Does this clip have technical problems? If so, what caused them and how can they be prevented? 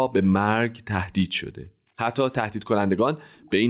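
Yes. Between 0.54 and 0.93 s, and again from 1.26 to 1.98 s, the room background sinks by about 40 dB and comes back. That's background gated by the echo canceller, clamping the mic while the far-end loudspeaker played. Gentler suppression or a headset would avoid it.

From 3.37 to 3.53 s there's a faint copy of the speech, roughly 30 dB down, trailing by 355 ms. It's likely an echo leak: the far side's canceller missed some loudspeaker pickup and sent it back. Headphones or better echo cancellation there would stop it.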